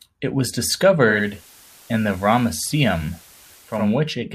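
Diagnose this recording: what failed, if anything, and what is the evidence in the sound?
Digital radio blending to analogue from 0.99 s to 4.02 s, at the receiver: a 473 ms cross-fade drops the speech about 1 dB and adds hiss about 25 dB below the speech as the set falls back to FM, then returns.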